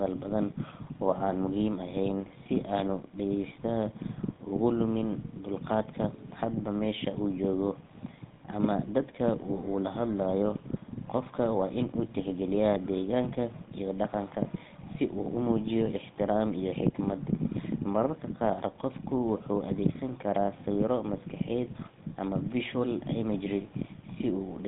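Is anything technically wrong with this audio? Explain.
Yes. The whole clip has been through the GSM full-rate codec, and the damage is plainly audible. This narrowband coder models the vocal tract and excites it with sparse, regularly spaced pulses at a rate that fits 13 kbps. The speech is confined to roughly 150 Hz to 3.7 kHz, with nothing above 3.8 kHz, and has a buzzy, gravelly roughness.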